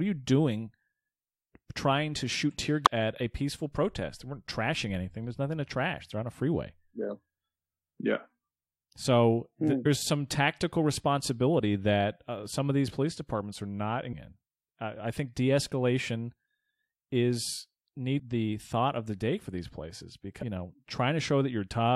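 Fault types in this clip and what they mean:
Damaged data in a compressed stream: five brief glitches, each about 20 ms or shorter, at 2.86, 9.85, 14.12, 18.18 and 20.41 s. The one at 14.12 s falls between "police departments are not" and "in I think". Corrupted bytes in the encoded speech make the decoder misread those frames and lose sync. It then hunts for the next valid frame header, leaving a short glitch in place of the missing audio.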